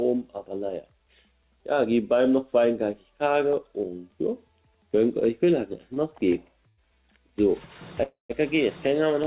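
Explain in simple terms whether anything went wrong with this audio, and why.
Twice the sound briefly sticks: at 5.94 to 5.99 s a sound is held a touch too long, and at 6.68 to 6.81 s the hold is longer. These are each a short stall from a late packet. A piece of audio didn't arrive on time, so the receiver kept stretching the last bit of sound until it came, about 23 ms and 93 ms of stretch, then carried on with nothing lost.

At 8.03 to 8.33 s the audio stops properly: the last sound is carried on and fades out, then roughly 140 ms of silence, before picking up again where it left off. This is a call audio freeze, likely caused by a run of packets held up on the network so the receiver's waiting store ran dry. Roughly a quarter of a second of filler was added, but none of the original audio is missing.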